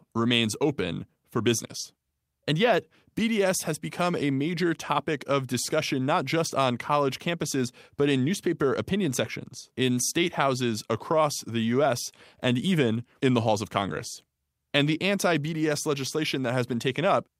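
Nothing stood out on listening to this speech recording.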